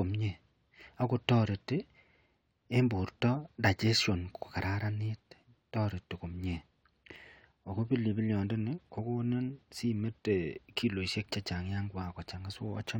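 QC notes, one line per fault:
Nothing to flag here; the speech comes through without a single problem worth a note.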